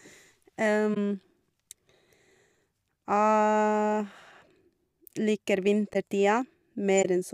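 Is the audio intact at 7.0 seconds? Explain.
No. From 6.98 to 7.06 s, a span of about 80 ms, the speech is disrupted. This is a corrupt frame concealed: flipped bits made an AAC frame unreadable, so the decoder detected it and papered over the gap by muting or reusing a scrambled copy of the last good spectrum. The length fits roughly three damaged frames.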